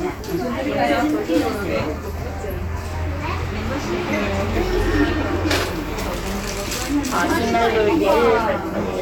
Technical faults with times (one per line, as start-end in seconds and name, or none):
none